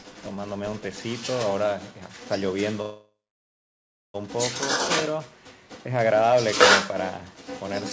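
A speech clip where a second voice runs underneath the whole thing, from start to finish, at about the same loudness as the main talker. That's the other side's voice leaking through, most likely the far end playing on a loudspeaker at this end and the echo canceller failing to strip it out of the mic. At 2.82 s the audio stalls and resumes at 4.16 s. The first moments trail off as a fading fill, then about 1 s is plain silence. That's a call audio freeze, likely packets held up in transit so the jitter buffer ran dry. Nothing gets lost; the sound just picks up where it stopped, about 1.3 s late. The call path itself, which sounds like G.722 with nothing above 8 kHz, just gives the usual wideband call band limit.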